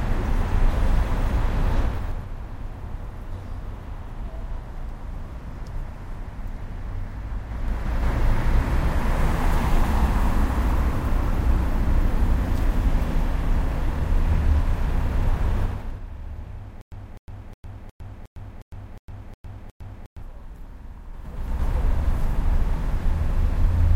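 From 1.79 to 2.30 s the level falls about 10 dB with zipper noise. The gain moves in 3 dB steps, with no smoothing. Each jump clicks, so the fade ticks. It steps again from 7.42 to 8.11 s, rising about 10 dB.

From 15.62 to 16.04 s the level drops about 15 dB, in faster 3 dB steps, roughly ten a second. The zipping is denser here. The same fault returns from 21.08 to 21.68 s, rising about 15 dB.

From 16.81 to 20.22 s there is stutter with silent gaps. A 254 ms burst plays, then 107 ms of digital silence follows. The same fragment repeats every 361 ms, nine times over. A stalled player likely replayed its last fragment, and the audio meant for that span is lost.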